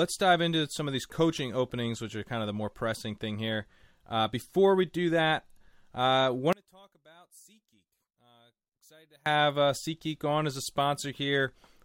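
A speech recording in which, from 6.53 to 9.26 s, the voice suddenly collapses by about 31 dB and nearly disappears before returning. The likely cause is one channel inverted: reversed polarity on one stereo side cancels the shared centred voice when summed to mono.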